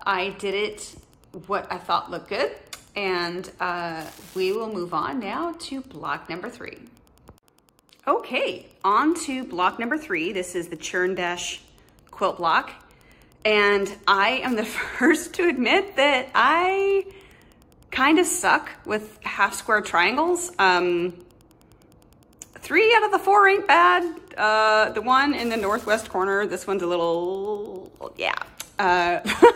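A faint, steady ticking runs through the whole recording, close to ten ticks a second and sitting roughly 35 dB below the main sound. This is Wi-Fi interference: a nearby Wi-Fi radio's beacon, sent every 102.4 ms, is being rectified by the audio circuit.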